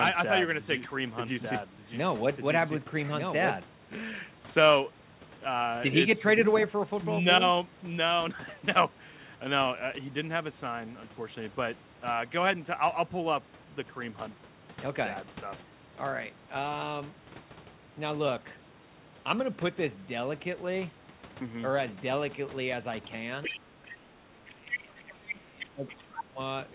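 From the start of the clip until 3.58 s, a doubled audio track is already under way: a second, full-band copy of the speech runs roughly one second behind the first, about 5 dB quieter. It has no reverberant tail or room colouring, and it stops abruptly at 3.58 s. The likely cause is the same signal being captured twice, once through a slower path, or an edit leaving two misaligned copies.

From 23.43 s to 26.23 s, the other side's voice leaks through in short scraps: 23.43 to 23.6 s at about 10 dB below the talker, 23.85 to 23.94 s at about 20 dB below, 24.71 to 24.78 s at about 5 dB below, 25.28 to 25.35 s at about 10 dB below, 25.88 to 25.95 s at about 20 dB below, and 26.17 to 26.23 s at about 10 dB below. These fragments are band-limited to about 4 kHz like the rest of the audio, which fits a 64 kbit/s G.711 mu-law path. They are the far end's loudspeaker output reaching the microphone, likely left over because the echo canceller did not fully remove it.

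The talker's speech is suppressed in double talk in two places. The first is a brief dip from 24.19 to 24.24 s of about 10 dB. The second runs from 24.47 to 26.39 s, where the level falls by as much as about 25 dB. This is likely the echo canceller, unable to separate the local talker from the loudspeaker echo while both sides spoke, attenuating everything.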